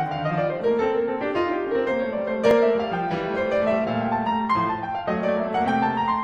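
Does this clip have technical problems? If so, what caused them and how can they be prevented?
Yes. In this music clip there is an overlap between stream segments at about 2.51 to 2.55 s. Two segment time stamps overlapped, so the player discarded about 40 ms of music it treated as duplicate, though it was not. The waveform jumps abruptly there and is heard as a click or small skip. A spectrogram shows a thin vertical broadband line, and the texture on either side does not join smoothly. The 2 s spacing points to a segment boundary. Prevent it by generating segment time stamps from one continuous clock, so that consecutive segments abut exactly and never overlap.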